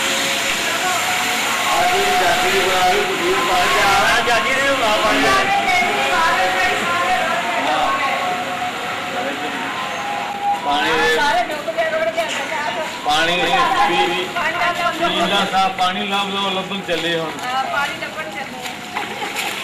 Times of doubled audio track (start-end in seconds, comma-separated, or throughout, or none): 13.43-15.49